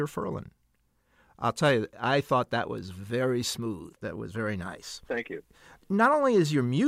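No technical faults can be heard in this recording.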